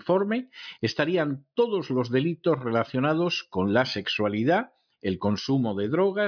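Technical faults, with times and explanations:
No technical faults are audible anywhere in this speech recording.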